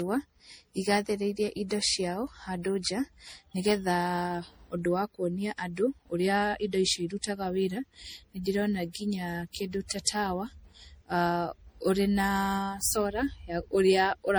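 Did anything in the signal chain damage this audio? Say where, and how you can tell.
Yes. Across the whole speech clip the sound is swirly and hollow, with a watery smear in the upper range and consonant attacks that blur rather than snap. The damage is more than a single pass at a modest bitrate would leave, so the codec stage is the likely culprit: generation loss from MP3 being decoded and re-encoded about seven times, at a rate that fits roughly 64 kbit/s. Each pass requantises on a shifted frame grid, piling up noise and spectral holes.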